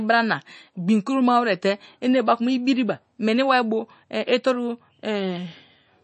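Speech, about 6 s long, carrying plainly audible MP3 compression damage from start to finish, likely the result of encoding at a low bitrate. Nothing is present above 8.3 kHz, so the top of the spectrum is cleanly lopped off and sibilants lose their edge. The remaining high band has a watery, swirling quality as weak frequency components drop in and out between frames, and consonant onsets sound smeared. That degree of band-limiting and artefacting fits a rate around 32 kbps.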